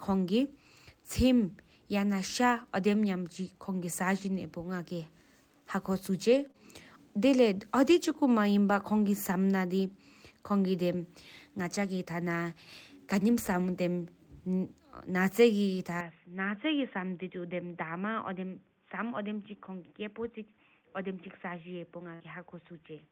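From 6.31 to 6.45 s, a lost packet rebuilt from error correction: the decoder played low-bitrate copies carried in the following packets, so about 80 ms of speech, which fits four lost 20 ms packets, sounds rougher and noisier with no gap. The same repair recurs at 7.92 to 7.98 s for about 40 ms and at 11.83 to 11.85 s for about 20 ms.

Immediately after the first repair come two short concealed packet losses, at 6.47 to 6.51 s and 6.51 to 6.56 s. Each drops 20 ms that never arrived in time. The receiver extrapolated the preceding sound for 17 ms and then 30 ms before rejoining the real signal, which is heard as a brief smear or wobble.

At 16.0 s the input switched to a poorer device, likely a change of microphone or headset profile. There is no silence at the change, but nothing above 3.6 kHz survives. The level drops about 5 dB and a new noise floor sits roughly 45 dB below the speech. 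The result is a duller, boxier tone through to the end.

Within that stretch, at 22.15 to 22.22 s, a burst of packet loss removes about 60 ms. Concealment extends the last sound for about 52 ms and fades it, producing a held buzz or hiss before the speech resumes later than it should.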